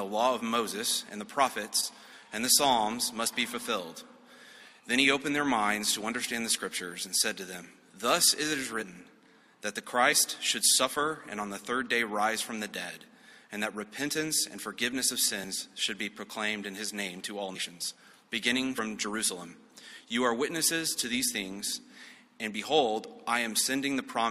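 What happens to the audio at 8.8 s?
At 8.81 to 8.83 s the audio jumps forward: compressed frames are skipped, so around 70 ms of material never plays. Whole frames were either absent from the stream or rejected by the decoder as corrupt, and playback resumes at the next good frame, a whole number of frame lengths later. If the codec is lossy, adjacent frames overlap in the decoder's windowing and the splice comes out as a short smeared blip; if it is lossless, the frames join with a hard click.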